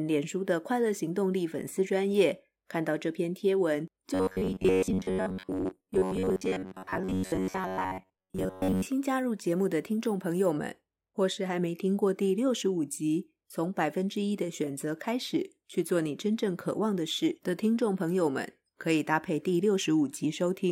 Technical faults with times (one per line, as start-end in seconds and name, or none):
4.14-8.88 robotic sound from repeated short buffers